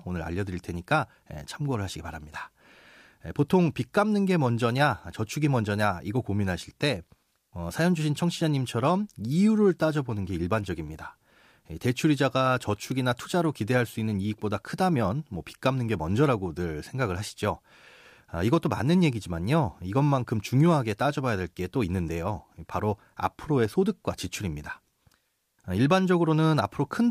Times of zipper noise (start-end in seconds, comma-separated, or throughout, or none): none